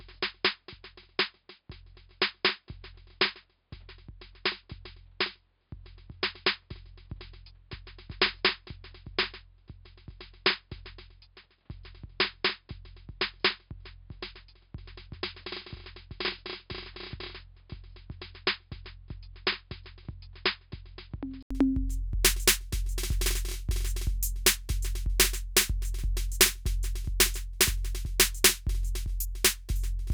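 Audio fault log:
0.00–21.51 s, input switched to a poorer device: the music sounds dull and boxy, with nothing above 5 kHz, a few dB quieter and over a faint added noise floor well below the music. It then opens up after an 80 ms gap at 21.51 s, likely a narrower-band input device giving way to a fuller one.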